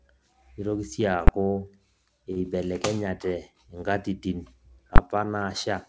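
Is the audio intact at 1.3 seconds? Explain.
No. At 1.28 s, invalid numbers at full scale: a calculation produced infinite or invalid values that were pinned to full scale for a 10 ms block, heard as one loud bang.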